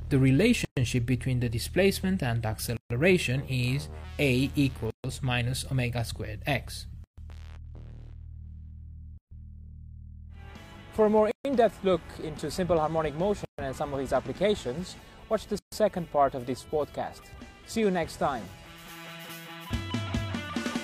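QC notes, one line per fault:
0.65, 2.77, 4.90, 7.04, 9.18, 11.31, 13.45, 15.59 s: gap at a join of encoded pieces, silences of 120 ms then 136 ms, recurring after each 2 s piece. Untrimmed encoder delay and end padding insert silence. Unlike a dropout, no sound is lost; it resumes exactly where it stopped.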